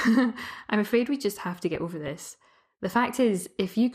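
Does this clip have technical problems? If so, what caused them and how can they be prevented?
Yes. The whole speech clip sounds dull and gurgly, with granular grit in the upper bands, likely MP2 compression at a low rate, around 80 kbps. Giving the stream a higher bitrate would prevent that.

DAB burbling comes in at 1.75–2.17 s and 3.66–3.75 s, where bit errors slipped past error correction and put short blips of noise into single sub-bands. Better reception or antenna placement would fix it.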